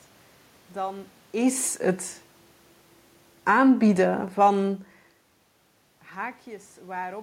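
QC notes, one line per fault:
3.34 to 4.96 s, automatic gain falling: the level sags by about 4 dB across this stretch, and the room noise sinks right along with the voice instead of holding steady underneath it. That shared drop is the clue. The automatic gain control judged the input too loud and wound its gain down gradually, scaling everything reaching the microphone. A talker moving away would lower the voice but leave the background where it was; the talker does shift around 5 s.
3.57 to 4.0 s, automatic gain rising: inside that slide there is a quick swell of about 5 dB lasting under half a second, with voice and room noise lifting together before the downward drift resumes. Here the gain control briefly decided the input had become too quiet and pushed its gain back up. Because it overlaps the falling correction, the level pumps up and down within roughly a second and a half.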